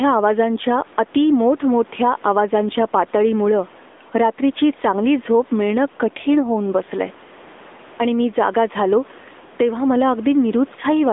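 Gain pumping runs through the whole clip. The level swings by around 5 dB. The room noise sits about 33 dB below the speech. The likely cause is excessive gain with a fast limiter pulling it back.

The AMR narrowband mobile codec damage is also present throughout and plainly audible. The band runs from 250 Hz to 3.6 kHz, with nothing above 3.8 kHz. The speech is coded at a bitrate near 10 kbps.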